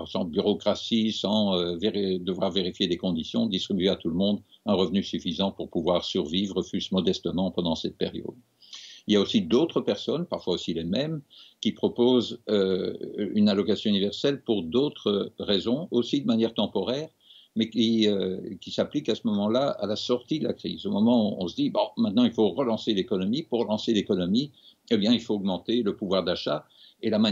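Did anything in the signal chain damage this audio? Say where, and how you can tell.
Yes. Hard clipping occurs at a gain or converter stage. Peaks overrun full scale by about 1 dB or less at 1.33–1.38, 3.88, 9.13–9.18, 9.55, 25.12 and 27.26 s, and their flattened tops add high harmonics heard as brief crackles.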